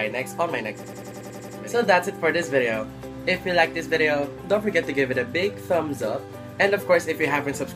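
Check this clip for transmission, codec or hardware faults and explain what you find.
One fault is present: a system hang loop from 0.84 to 1.58 s. The system froze while the hardware kept replaying its ring buffer, so a 93 ms slice (fitting a 4096-sample buffer) repeats eight times at 10.8 Hz, a machine-gun stutter. The waveform shows identical repeated blocks, and the spectrogram shows evenly spaced vertical stripes.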